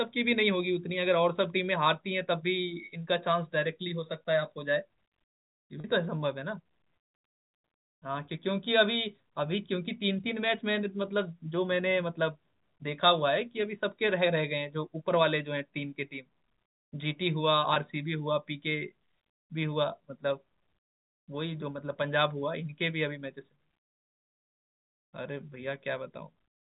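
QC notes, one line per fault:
5.80–5.84 s and 17.74–17.76 s, packet loss with pitch repetition: 40 ms and 20 ms gaps filled by repeating the last pitch period, heard as a brief buzzy held tone.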